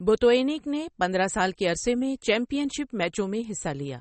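Throughout the speech, the audio was most likely squeezed through MP3 compression at a very low bitrate, which fits something around 32 kbps. With so few bits, the encoder drops all treble above about 8.4 kHz and discards quieter frequency detail that flickers in and out from one frame to the next. The voice is therefore dull at the top, with a plainly audible watery, swirling texture, metallic chirping on s sounds, and softened consonant attacks.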